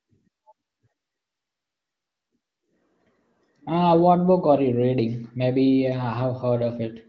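No technical faults can be heard anywhere in the speech. It has the band-limited sound of wideband HD Voice coding, with nothing above about 7.3 kHz, and the speech stays clear and smooth, which points to one of the higher AMR-WB rates, around 18 kbit/s.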